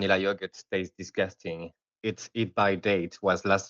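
Automatic gain rising sets in at 2.32 s and runs to the end of the speech at 3.7 s: the gain control judged the input too quiet and kept raising its gain, so the voice and the background noise swell together. The 8 kHz band limit, which fits a call codec such as Opus at around 32 kbps, is normal for a call.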